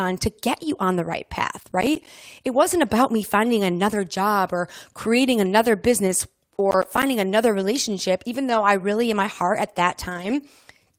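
Right after "you on the right", from 1.59 to 2.07 s, there's processor overload crackle: the machine keeps missing its deadlines on what sound like roughly 10 ms buffers, and each miss drops a hard-edged gap of silence. Then at 6.07 to 6.13 s comes a lost packet rebuilt from error correction, about 40 ms played from a low-bitrate backup copy, so there's no gap, just a rougher, noisier patch. More crackle runs from 6.71 to 7.03 s, just before "another relationship even". Between "another relationship even" and "really in my heart", 8.49 to 8.67 s, there's another rebuild of about 100 ms, and a final one of about 140 ms sits at 10.09 to 10.35 s.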